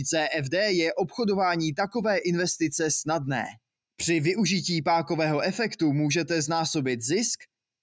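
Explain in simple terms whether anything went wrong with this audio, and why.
Nothing went wrong here.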